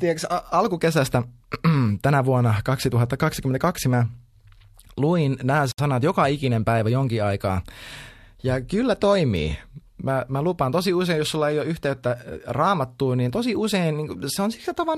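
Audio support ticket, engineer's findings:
Gap at a join of encoded pieces, 5.72–5.78 s: 69 ms silence between "luin nämä" and "joka ikinen päivä jonkin". Splice kept encoder start delay and final-frame padding.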